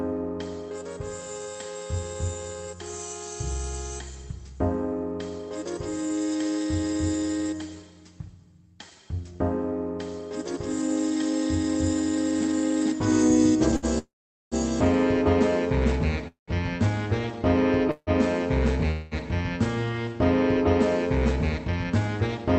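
At 13.76 s there is a short stall from a late packet. A packet missed its playout time, the jitter buffer ran dry, and the receiver held the last sound for about 61 ms until the packet arrived. Playback then resumed from the same point, so nothing is lost. What you hear is one sound drawn out slightly too long, with a faint buzz or dip, which pushes everything after it about 61 ms later.

Four call audio freezes follow.

The first runs from 13.98 to 14.55 s. The last sound is extended as a decaying buzz or hiss for about 80 ms, then drops to silence for about 450 ms. In total 531 ms of filler is inserted.

The second runs from 16.28 to 16.51 s. It inserts 200 ms, including about 140 ms of silence.

The third runs from 17.91 to 18.10 s. It inserts 159 ms, with about 50 ms of silence.

The fourth runs from 18.91 to 19.14 s. It inserts 205 ms and never reaches silence, so it is heard entirely as the fading continuation.

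In every case the audio picks up exactly where it stopped, so these are inserted gaps rather than dropouts. The likely cause is packets held up in transit long enough to empty the jitter buffer.

From 21.49 to 22.45 s there is a jitter buffer speed-up. The buffer held more audio than its target. To shed that latency, the receiver repeatedly cut out pitch-period-sized slices, removing roughly 150 ms in all. Playback runs at about 112% speed with the pitch unchanged, so the passage sounds noticeably hurried.

Throughout the clip, the Opus call path adds its usual coding noise, and the top end is limited, consistent with an 8 kHz audio bandwidth at a modest bitrate.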